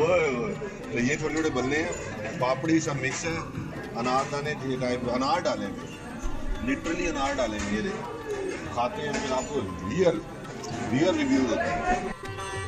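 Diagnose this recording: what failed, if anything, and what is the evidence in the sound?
Nothing failed in this recording, and the sound gives no evidence of a fault at any stage.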